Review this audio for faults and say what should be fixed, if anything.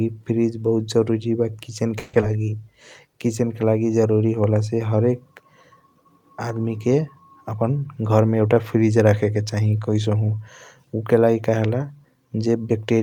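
A call audio freeze runs from 1.99 to 2.15 s. The sound stops advancing and the last fragment is stretched into a fading buzz for about 140 ms. When the stream resumes it picks up exactly where it left off, so nothing is lost, but playout now sits about 140 ms later than before. The likely cause is delayed packets draining the jitter buffer. Provisioning the jitter buffer with enough headroom for the network's delay spikes would prevent it.

A skip ahead follows at 2.21 to 2.24 s. Roughly 70 ms of speech is missing, and the two sides are joined with only about 10 ms of fill, so the audio lurches forward. It undoes part of the freeze's added delay, cutting latency by roughly 50 ms. Audio was dropped while newer audio was already queued. Recovering delay gradually by time-scaling, rather than dropping audio outright, would avoid the audible jump.

A jitter buffer slow-down covers 2.27 to 2.52 s. 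Pitch periods are repeated to play the speech at about 84% speed with pitch unchanged, adding 46 ms. The sounds are drawn out as the buffer rebuilds its reserve right after the skip. Smoother target-delay control that does not swing between dropping and stretching would prevent this back-and-forth.

A jitter buffer speed-up runs from 7.55 to 8.58 s. Short pitch-period chunks are removed repeatedly, totalling roughly 150 ms, so the speech plays at about 112% speed at the same pitch and sounds hurried. This follows an overfilled buffer, as when a burst of delayed packets arrives together. Capping the compression rate, or spreading the reduction over a longer span, would make the catch-up less noticeable.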